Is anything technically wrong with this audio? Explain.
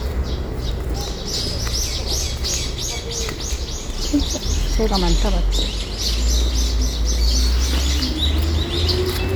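Yes, there's one glitch. At about 4.32 to 4.38 s a couple of compressed frames get skipped. Those frames were either missing from the file or thrown out by the decoder as damaged, so playback leaps ahead, here by around a tenth of a second, which fits roughly two frames of about 46 ms each. The seam comes across as a sudden jump forward.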